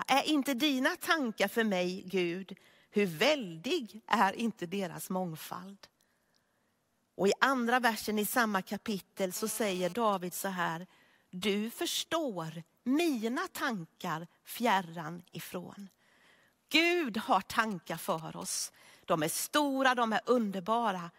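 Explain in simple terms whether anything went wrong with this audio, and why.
A nearby 2G mobile phone's radio pulses leaked into the recording circuit, causing GSM phone buzz from 8.88 to 10.15 s, after "andra versen i samma": a harsh, raspy 217 Hz drone that comes and goes, ending before "så här du förstår".

Later, from 17.62 to 18.44 s, a phone's brief radio exchanges produce GSM signalling bursts, a galloping dit-dit-dit of short buzzes.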